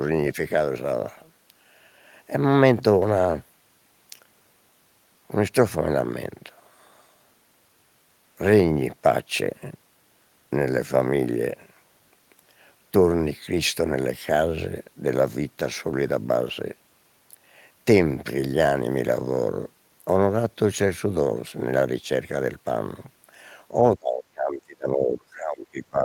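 Speech suppressed in double talk runs from 23.96 s to the end of the clip at 26.05 s, with the speech dropping sharply, by roughly 25 dB at its deepest. The likely cause is an echo canceller turning down the local talker while the far side also spoke.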